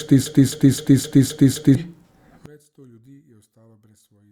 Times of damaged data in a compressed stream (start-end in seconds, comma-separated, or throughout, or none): none